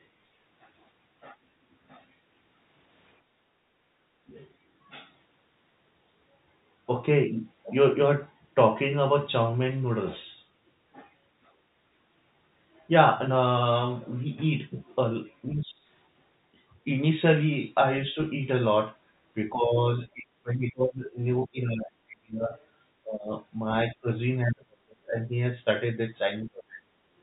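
From 3.23 to 4.30 s, the background is gated by the echo canceller. Room sound dips by about 19 dB while the loudspeaker plays, then returns.

Speech is suppressed in double talk at 15.48 to 15.82 s, 18.13 s, 19.53 to 23.33 s, 23.93 to 25.30 s and 26.43 to 26.90 s. The likely cause is the canceller ducking the talker along with the echo. The drops reach about 40 dB.

At 22.6 and 24.5 s, the other side's voice leaks through as faint scraps, likely residual echo. It sits about 35 and 30 dB below the speech in the telephone-band signal.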